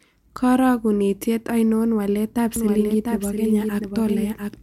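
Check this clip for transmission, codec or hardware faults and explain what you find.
There's one fault here. From 2.56 s, right after "ainon walaetap", through to the end, you get a doubled audio track: a flat, somewhat quieter copy trailing by roughly 0.7 s, likely from a second, slower capture path.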